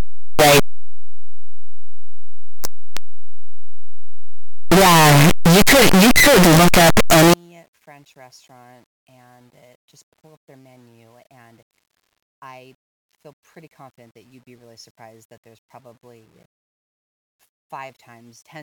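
From 0.0 to 7.34 s, the 8-bit samples were likely read with signed and unsigned mixed up, flipping the top bit so each zero crossing jumps across the whole range. The speech becomes very loud, harsh distortion, with quiet stretches as loud as everything else.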